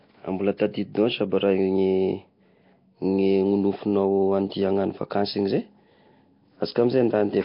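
From start to finish the speech carries a rough, hissy halo and a smeared, underwater quality, with nothing above about 5.3 kHz. This is heavy Nellymoser compression, likely from Flash's Nellymoser Asao microphone codec at a rate that fits around 22 kbps. It codes short blocks at a fixed two bits per sample, so weaker bands get no bits and are filled with noise, which produces the hiss and smearing.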